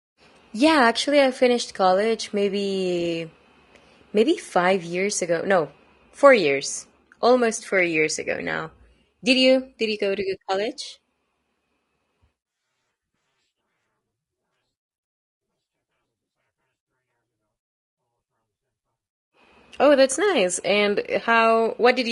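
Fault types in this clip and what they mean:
Low-delay AAC compression: The speech sounds rough and grainy from start to finish, and the damage is plainly audible. A hiss sits between the pitch harmonics, and the top of the band sounds dull or artificial. This points to a codec that likely works in very short frames, as AAC-ELD does for calls. Short frames cannot separate closely spaced harmonics well. The roughness fits a bitrate near 32 kbps.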